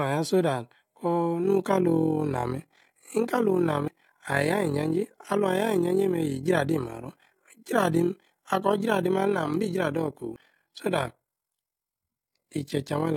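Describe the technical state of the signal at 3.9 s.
At 3.88 s there is an abrupt forward jump in the speech, with no gap of silence. This is most likely a dropped buffer (overrun): the capture side failed to read its samples before the hardware overwrote them, so roughly 70 ms of audio is lost and the two sides are spliced directly.

Running through this moment, from 1.44 s to the end, is overlap-add ripple. Frames were windowed and recombined with an overlap that does not sum to unity gain, so the level swings by about 11 dB at roughly 40 Hz, heard as a rough flutter.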